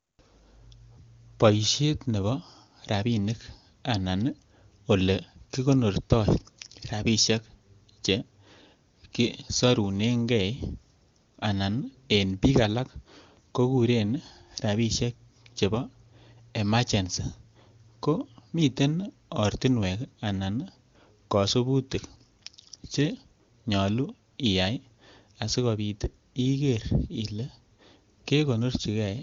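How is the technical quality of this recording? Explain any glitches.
No glitches to report: the speech comes through the AMR wideband (HD Voice) path at what sounds like its highest rate, with any coding damage faint at most.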